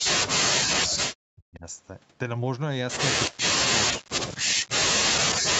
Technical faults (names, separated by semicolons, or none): speech suppressed in double talk